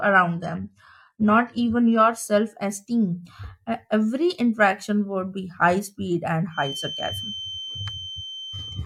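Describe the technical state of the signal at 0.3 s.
At 0.3 s the speech sits inside an adaptive stream starting at a low bitrate, which lasts from 0.0 to 2.0 s. The player opened on a lean encoding and then upgraded once it had gauged the connection. The treble sounds thin and partly synthetic, with smeared codec artefacts, which fits HE-AAC at around 16 kbit/s. On a spectrogram, energy stops flat near 11.7 kHz, then widens abruptly at 2.0 s, with no break in the waveform.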